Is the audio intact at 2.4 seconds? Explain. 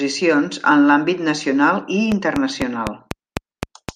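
No. From 2.12 to 3.90 s a train of clicks runs through the speech, likely from interference or a faulty connection injecting pulses. About seven similar clicks arrive at a regular 4 per second, peaking roughly 15 dB above the speech and ticking audibly over it.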